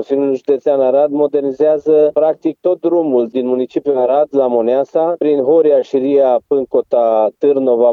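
No technical faults can be heard anywhere in this clip.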